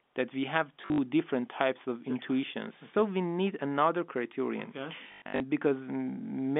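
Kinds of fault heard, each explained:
Packet loss with last packet repeated: missing packets are filled by replaying the previous one, giving buzzing robotic stutters near 0.8 s and 5.0 s.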